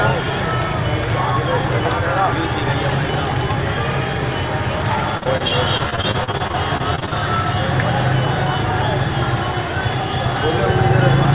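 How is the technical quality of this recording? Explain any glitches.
The main issue is a stretch of repeated packet loss with a robotic sound, heard through the narrowband call path, which stops at 4 kHz and fits G.711. From 5.18 to 7.13 s, dropouts up to 40 ms keep getting patched by stretching the previous sound, covering about a quarter of that stretch and making it choppy with pieces missing.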